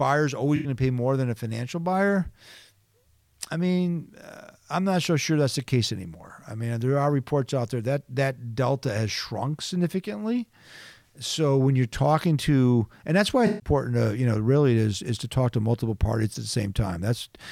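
AAC frame loss with concealment occurs at 0.56 to 0.68 s and again at 13.47 to 13.70 s. Each time, compressed frames never reached the decoder, so it rebuilt the missing stretch from the last good spectrum. The result is a brief smeared, noisy or phasey patch in the speech. The first gap fits roughly four lost frames. The second, longer one fits about seven.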